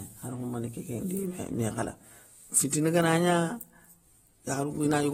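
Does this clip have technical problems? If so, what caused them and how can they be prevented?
Yes. The speech carries plainly audible coding damage from start to finish, with nothing above 16.6 kHz and a dull, smeared character. The likely cause is AAC compression: starved of bits, the encoder quantised coarsely and lowered its cut-off, which fits AAC-LC at about 36 kbps. Encoding at a higher bitrate would prevent it.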